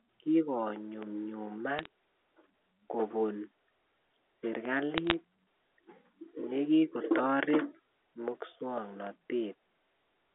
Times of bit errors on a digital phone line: 1.79-1.86, 4.98-5.14

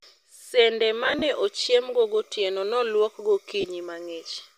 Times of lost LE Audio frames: 1.04-1.22, 3.61-3.65

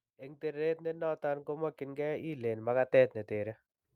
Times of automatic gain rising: 0.16-2.76

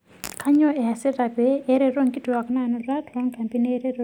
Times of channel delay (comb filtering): 2.50-4.04

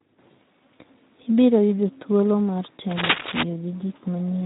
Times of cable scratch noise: 2.91-3.43

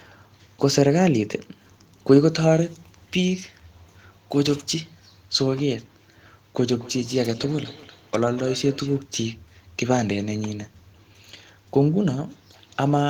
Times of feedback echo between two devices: 6.80-9.03

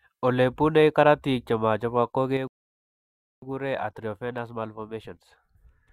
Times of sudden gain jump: 2.37-5.92

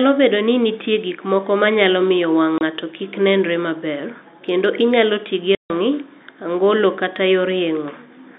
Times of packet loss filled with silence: 2.58-2.61, 5.55-5.70

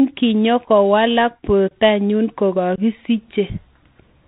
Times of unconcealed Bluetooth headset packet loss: 1.68-1.71, 2.76-2.79

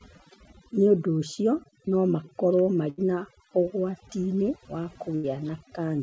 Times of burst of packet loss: 2.90-2.99, 5.15-5.25

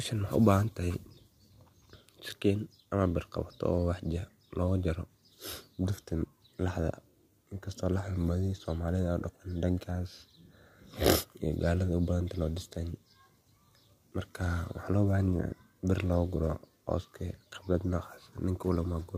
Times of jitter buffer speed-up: none

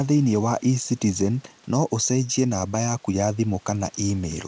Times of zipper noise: none

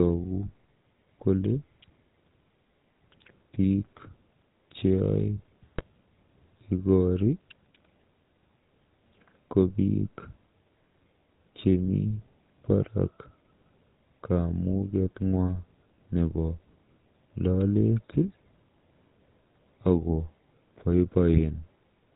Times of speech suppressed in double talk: none

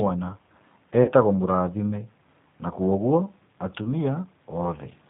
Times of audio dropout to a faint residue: none

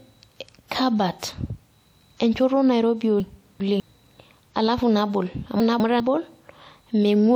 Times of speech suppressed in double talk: none

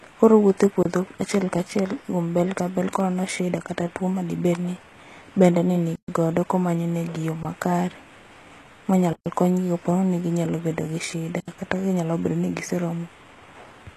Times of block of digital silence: 0.83-0.85, 5.96-6.08, 7.43, 9.13-9.26, 11.40-11.48

